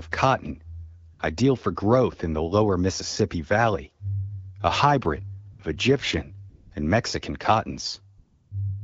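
AMR comfort noise fills four gaps in this speech: 1.13 to 1.19 s, 5.51 to 5.59 s, 6.49 to 6.71 s, and 8.17 to 8.51 s, the last lasting 340 ms. In each, the transmitter treated the talker as silent and stopped sending speech frames, so the receiver generated smooth synthetic noise from a rough level and spectral estimate. The real background drops out and is replaced by a steady hiss that switches in and out, under lightly coded wideband audio.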